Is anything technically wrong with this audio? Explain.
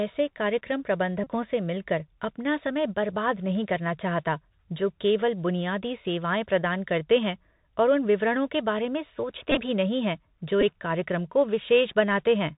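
Yes. The speech has two kinds of fault.

Throughout, the audio carries the Bluetooth CVSD headset codec. Nothing above 4 kHz survives. The one-bit up-or-down coding, which fits a 64 kbps link, lags loud high sounds. S sounds turn scratchy, and a granular hiss sits under everything.

There are three Bluetooth headset packet repeated events. Lost packets were replaced by decoding the previous packet again. Repeating every 3.75 ms gives a buzz near 267 Hz. From 1.24 to 1.27 s, before "से मिलकर अपना समय", about 26 ms is lost, which fits roughly seven packets. From 9.51 to 9.58 s, before "भी नहीं हैं जो", about 38 ms is lost, scattered over 60 ms, with the longest run around 20 ms. At 10.61 to 10.63 s, between "भी नहीं हैं जो" and "कार्यक्रम को", about 11 ms is lost. That fits roughly three packets and makes a brief tick-like buzz.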